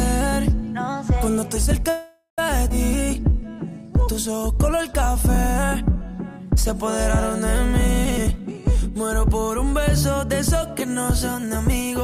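At 1.89 to 2.39 s a call audio freeze stretches the last sound into a fading buzz for about half a second, ending in a 90 ms silence. This is likely because packets were held up and the jitter buffer ran empty. A spectrogram shows smeared, steady bands that thin out into a blank strip, and nothing is lost. At 2.69 s a skip ahead drops roughly a fifth of a second, and the two sides are joined with only a 10 ms fill, visible as an abrupt waveform discontinuity. From 2.91 to 5.48 s a jitter buffer slow-down plays at 95% speed, adding 146 ms by repeating pitch periods, so the patterns look stretched in time while the harmonic spacing stays unchanged. Jitter buffer speed-ups from 8.04 to 9.73 s (121%, roughly 400 ms cut) and from 10.88 to 12.02 s (106%, about 70 ms cut) remove short pitch-period pieces, leaving compressed spectrogram patterns at the same pitch.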